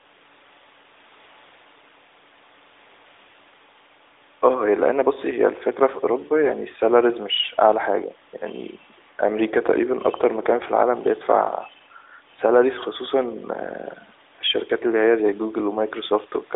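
No technical faults can be heard anywhere in this recording.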